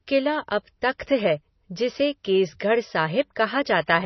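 Throughout, the speech stops dead above 6 kHz, a flat ceiling on a spectrogram, with smeared, watery detail, likely low-bitrate audio saved at a high bitrate, its damage kept.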